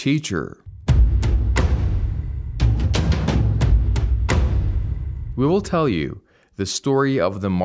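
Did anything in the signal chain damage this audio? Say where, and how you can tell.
No, nothing audible points to damage at any stage of the chain, and the signal holds steady level, continuity and timing throughout.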